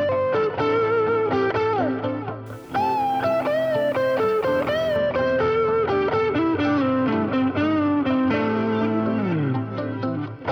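From 2.46 s to 4.97 s the audio turns grainy, with distortion that tracks the signal and roughens quiet passages. This is low bit depth without dither, likely from rounding to about 7 bits, leaving the error around 35 dB below the signal.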